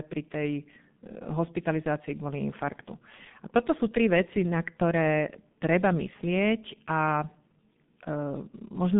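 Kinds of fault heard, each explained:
G.723.1 codec: low-rate telephony coding near 6.3 kbit/s leaves speech muffled and hoarse; a spectrogram shows energy only from about 150 Hz to 3.6 kHz, nothing above 3.8 kHz.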